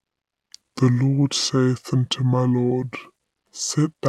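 Throughout, the speech sounds low and dragging, slowed to about two-thirds speed and seven semitones down. It is a wrong sample rate, consistent with 48 kHz audio played at 32 kHz.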